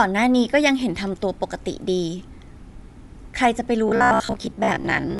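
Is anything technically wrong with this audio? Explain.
Yes. Throughout, the audio was likely squeezed by Bluetooth LC3 compression, which zeroes much of the upper spectrum and noise-fills the upper band, leaving speech plainly grainy and breathy-edged.

From 3.89 s to 5.19 s, playback likely kept repeating short buffers while about half the real audio was skipped, producing robotic sound with a rigid 66.8 Hz metallic buzz, consistent with 15 ms buffers.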